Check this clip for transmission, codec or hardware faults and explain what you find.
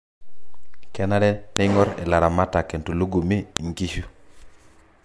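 Two sharp clicks mark a file header played as audio, at 1.57 s and 3.57 s, exactly 2.0 s apart. The speech was joined from 2-second WAV pieces whose header bytes were left in, so each piece's opening bytes play as a loud, instantaneous snap regardless of the surrounding speech.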